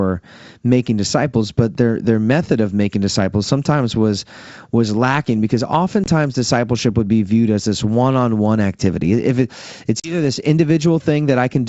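At 6.04 s the speech drops out for about 20 ms, roughly one packet's worth. This is packet loss on an ADPCM call. The gap is filled with silence and has hard edges. The decoder's predictor and step size then no longer match the sender's. So the sound comes back with brief, slight distortion. At 10.00 s it happens again. About two packets, 40 ms, go missing. The disturbed recovery runs to 10.16 s.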